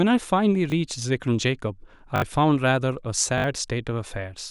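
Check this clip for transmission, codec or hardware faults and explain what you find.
Three repeated buffer faults occur in this speech. At 0.70–0.72 s, 2.16–2.22 s and 3.38–3.44 s, fresh audio arrived late, so the device replayed its last 20 ms block: once at first, three times later. Each causes a brief stutter with hard joins and a small gap of missing speech.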